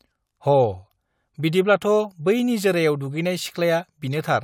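No technical faults can be heard anywhere in the speech; the signal stays continuous and intact throughout.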